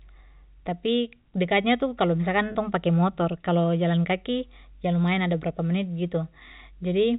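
A stretch of speech carried over a G.711 telephone path lost about 30 ms of data at 2.52 s, which fits a single dropped packet, between "tapi dekatnya tu kalo" and "tong pake motor kalau". This is packet loss with pitch repetition: the receiver repeated the last pitch period to fill the gap, so the sound briefly holds with a slightly buzzy, sustained quality before the speech resumes.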